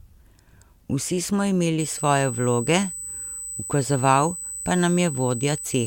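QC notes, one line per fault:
1.80 s to 5.86 s, USB whine: a steady 8 kHz tone comes in and sits fairly loud, roughly 10 dB under the speech, right to the end. The bus draws current in 125-microsecond microframes, and that ripple leaks through power or ground as a fixed pitch.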